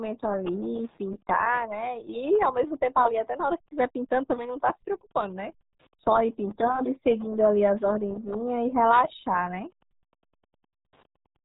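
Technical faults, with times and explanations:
Throughout, Wi-Fi interference: the audio circuit rectifies beacons from a nearby Wi-Fi radio every 102.4 ms, producing faint ticking about ten times a second, roughly 40 dB below the speech.
Throughout, RealAudio 14.4 codec: heavy low-rate encoding, which fits an 8 kbit/s dial-up stream, removes everything above 3.8 kHz, leaving the speech muffled and gargly.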